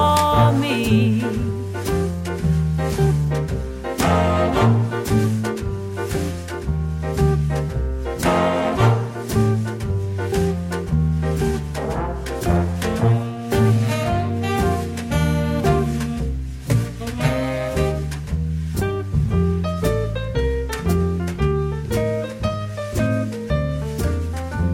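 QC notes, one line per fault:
No faults turned up on this one, so there's nothing to log.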